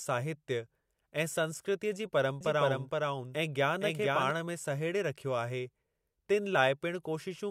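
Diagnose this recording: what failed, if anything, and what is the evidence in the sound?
A second capture path or an out-of-step edit likely fed the same speech into the mix twice, producing a doubled audio track from 2.41 to 4.31 s. A full-band copy at about equal level trails by roughly half a second, dry and without decay, switching on and off abruptly.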